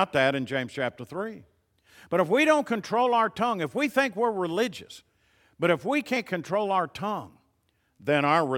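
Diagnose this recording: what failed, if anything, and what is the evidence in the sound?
The failure is at the codec stage: compressed frames skipped. At 6.16 s, between "religious but if we" and "control our tongue", the speech jumps ahead by around 50 ms, roughly two frames, which fits a frame length of about 23.2 ms. The decoder never outputs those frames, either because they were missing from the file or because it discarded them as damaged.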